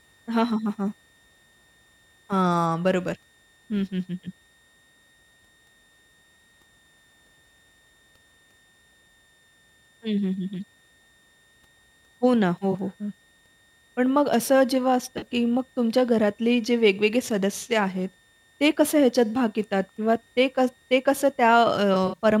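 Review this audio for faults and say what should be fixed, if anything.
A switching supply whistle runs through the whole recording: a thin, steady tone wandering between 1.81 and 1.86 kHz, roughly 40 dB below the speech, from a power supply oscillating in its audible range. On a spectrogram it is a faint horizontal line near 1.8 kHz spanning the full width. Fix it by powering the recorder and preamp from a linear or well-filtered supply, or by moving the switching adapter away from the audio chain.

AAC frame loss with concealment appears three times: at 12.72 to 12.75 s (21.3 ms, consistent with one frame), at 15.18 to 15.27 s (42.7 ms), and at 21.93 to 22.25 s, where 128 ms of gaps are scattered across about 280 ms, with the longest run around 70 ms. The decoder patched each gap by reusing the last good spectrum, giving a smeared, phasey blur. On a spectrogram these show as blocky, repeated columns; on the waveform the envelope dips or flattens. 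Fix it by using a more reliable transport, or by adding error protection or retransmission to the stream.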